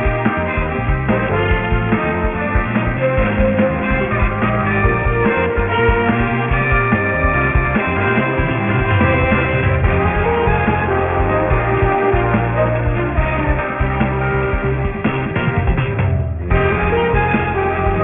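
Aliasing runs throughout. The sound was downsampled without an anti-alias filter, and a band edge at 3 kHz points to a 6 kHz rate. Higher content folds back as gritty, metallic tones about 15 dB down. A spectrogram shows energy pressed hard against 3 kHz.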